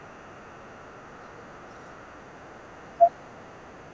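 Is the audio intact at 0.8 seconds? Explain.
No. At 0.8 s, and across the whole clip from 0.0 to 3.93 s, a very faint second voice sits far beneath the main speech. This is the other side's voice leaking through, likely loudspeaker playback reaching the microphone that the echo canceller did not fully remove.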